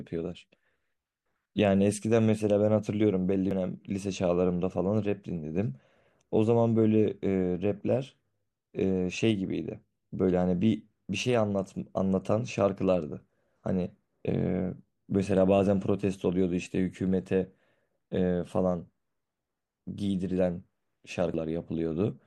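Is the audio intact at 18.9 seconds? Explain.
Yes, the audio is intact at 18.9 seconds: no dropout, click, distortion or other fault can be heard at that point.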